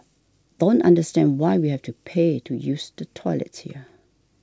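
No technical faults can be heard in the speech, which has the roughly 7 kHz bandwidth of G.722 wideband telephone coding and a steadiness that fits its full 64 kbit/s mode.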